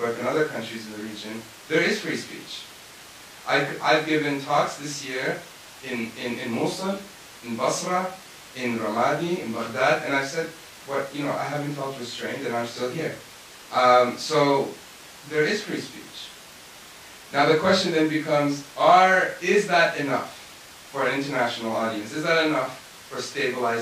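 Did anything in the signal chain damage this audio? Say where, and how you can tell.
No, nothing in the signal chain damaged this speech recording. No stage from capture through to playback leaves any audible mark on the sound.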